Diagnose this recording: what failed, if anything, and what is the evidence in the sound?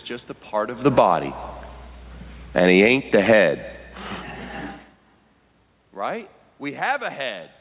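The automatic gain control in the call processing stage is pulling the level down in two places. From 0.82 to 1.14 s the gain drops by about 13 dB, and from 2.42 to 3.48 s by about 11 dB. The room noise sinks along with the speech each time. That is what separates this automatic gain falling from the talker moving, as happens around half a second and again near 4.5 s, where only the voice changes level.

The same control then responds with automatic gain rising, lifting the level by about 10 dB from 1.05 to 1.59 s and by about 4 dB from 2.91 to 3.84 s. Each rise begins before the preceding fall has finished, so the level pumps down and back up within about 0.8 to 1.4 s. The background noise swells with the speech, which rules out someone leaning toward the microphone. The narrow band, with nothing above 4 kHz, fits the G.711 call codec.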